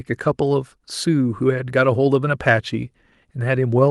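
No technical faults can be heard in this speech.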